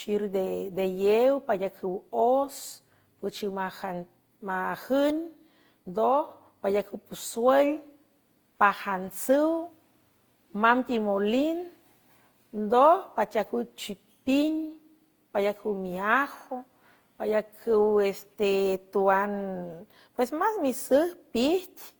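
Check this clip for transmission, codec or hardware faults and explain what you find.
Two faults run through the whole of this speech clip: a clock problem at the converter and stacked lossy coding.

Sample clock jitter, start to finish: the converter's clock wanders by a fraction of a microsecond, so samples land slightly off time. Steep parts of the waveform suffer most, leaving a faint roughness around -50 dB that rides up on loud, bright syllables and disappears in pauses.

Generation loss, throughout: the speech sounds swirly, hollow and smeared, with softened consonant attacks and nothing above 20.1 kHz. The likely cause is repeated Opus decode and re-encode passes, perhaps four or so at a rate that fits 48 kbit/s. Each pass requantises on a shifted frame grid, so noise accumulates.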